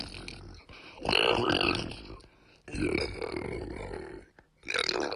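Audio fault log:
No faults heard in these sounds.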